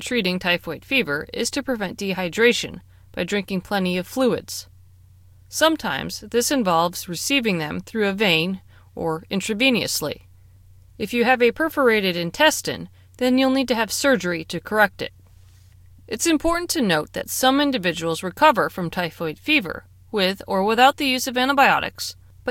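No technical faults can be heard anywhere in the recording.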